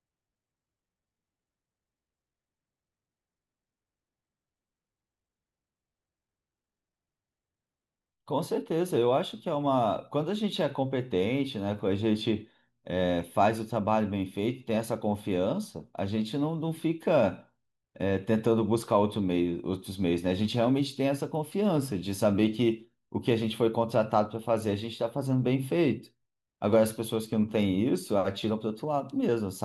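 Listening to this speech recording, nothing technical stood out as wrong at any point.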